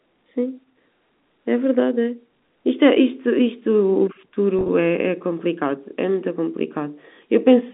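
Packet loss with pitch repetition, 4.59–4.69 s: 60 ms of scattered gaps are bridged by repeating the last pitch period, sounding briefly held and buzzy.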